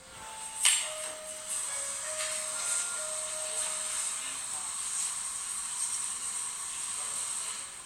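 No technical fault can be heard anywhere in this recording of sounds. Nothing in it needs a time mark or a repair.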